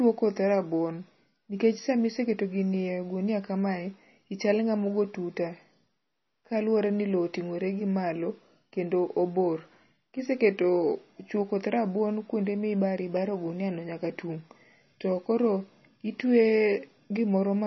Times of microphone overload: none

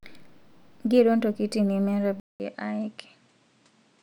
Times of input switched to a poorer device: 2.20-4.03

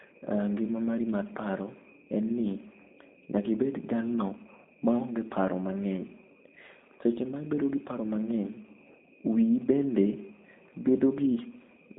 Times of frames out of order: none

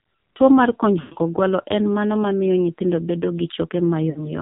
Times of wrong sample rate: none

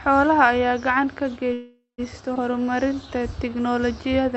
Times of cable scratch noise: none

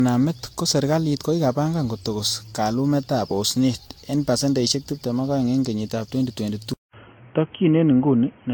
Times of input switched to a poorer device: 6.73-8.54

